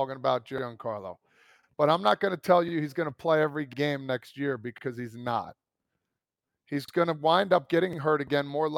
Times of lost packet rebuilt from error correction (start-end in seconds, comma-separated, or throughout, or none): none